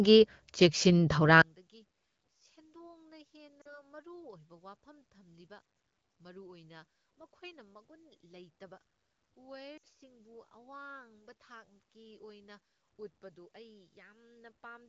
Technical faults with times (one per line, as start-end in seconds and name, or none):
1.42-14.89 one channel inverted
3.61-3.78 lost AMR speech frames
9.77-9.84 lost AMR speech frames